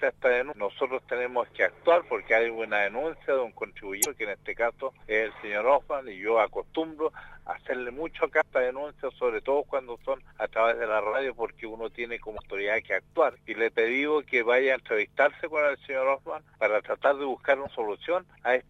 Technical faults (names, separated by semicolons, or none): damaged data in a compressed stream